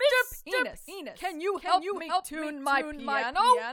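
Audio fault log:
Throughout: doubled audio track. Each sound repeats as a dry, full-band copy roughly 400 ms later and about 5 dB quieter, with no decay or room colour, so it reads as a distinct, clean repeat. This is likely from the same audio being captured twice, once through a slower path.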